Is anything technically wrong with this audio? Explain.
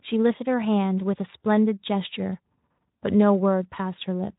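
No, nothing is technically wrong.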